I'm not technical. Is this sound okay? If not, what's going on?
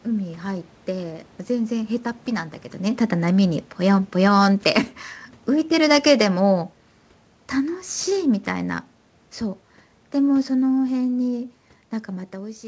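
No. From about 3.16 to 4.83 seconds the speech starts out loud and then steadily sinks, with the background going down along with it. That is automatic gain falling: the system judged the input too loud, or its background noise too strong, and gradually turned its own volume down.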